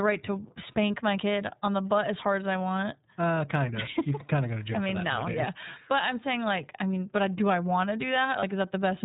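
iLBC codec coding runs through the whole clip. The speech is squeezed into a narrowband VoIP format that codes each frame's excitation on its own, so nothing above 4 kHz survives and the voice sounds plainly rough and somewhat synthetic, with a thin, boxy top end. The frame timing this suggests points to 30 ms frames, which fits the 13.33 kbps mode.

Lost iLBC frames occur from 8.39 to 8.43 s, right after "do I want to". A gap of about one 30 ms frame went missing, and the decoder covered it by repeating the last pitch cycle blended with noise. The result is a brief held, faintly buzzy vowel-like smear in place of the real sound. Because each iLBC frame stands alone, the audio snaps back to normal immediately afterward.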